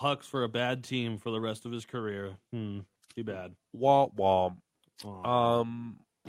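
Nothing stood out as a technical fault on listening to this speech recording.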